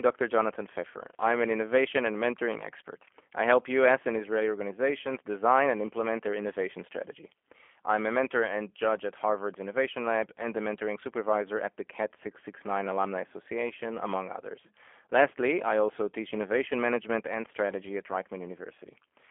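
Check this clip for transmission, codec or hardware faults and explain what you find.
There is one fault, present throughout the speech: G.729 codec damage, plainly audible. The coder rebuilds each 10 ms frame from a vocal tract filter, a pitch predictor and a few pulses, which fits an 8 kbit/s stream. The band runs from 250 Hz to 3.4 kHz, with nothing above. The result sounds rough and faintly synthetic. A clean telephone band-limit would only dull the sound, without this reconstructed grain.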